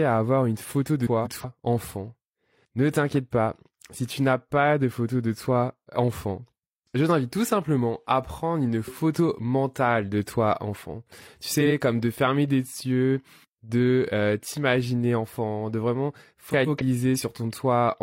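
Three instances of frames out of order occur. Just after "avoir une photo de", 1.06 to 1.45 s, two adjacent blocks of about 186 ms each play swapped, which fits runs of four frames. At 11.60 to 11.72 s, before "comme de fermer des", blocks of about 46 ms trade places, pointing to single frames. After "t'imaginer enfant de vraiment", 16.50 to 16.83 s, blocks of about 139 ms swap. Each sounds like a garbled flutter, and no time is lost.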